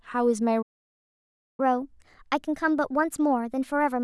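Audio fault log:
0.62–1.60 s, playback stall: the speech cuts out mid-flow and the output goes completely silent for just under a second, about 0.96 s, before sound resumes. The likely cause is the player running dry of buffered data or its audio thread being blocked.
1.60–4.03 s, catch-up at higher speed: once sound returns, the speech runs fast and higher in pitch, about two semitones up, to the end of the clip. The player is resampling its backlog at 1.15 times normal speed to recover the lost time.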